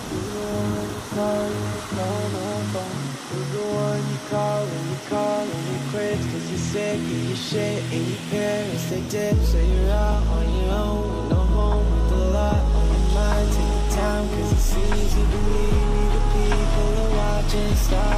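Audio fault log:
No faults are heard anywhere in the clip. The log has nothing to record for this one.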